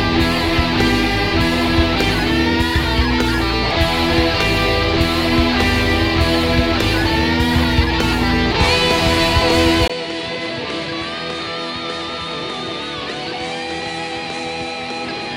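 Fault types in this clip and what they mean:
Input switched to a poorer device: At 9.88 s the sound drops out for a brief 20 ms gap, then resumes duller and noticeably quieter, by around 10 dB. From there to the end nothing above 10.5 kHz comes through, and a faint new background hiss sits well beneath the signal. This most likely comes from the recording input changing mid-take to a lesser microphone or headset path. That device's narrower band, lower gain and own noise replace the original character.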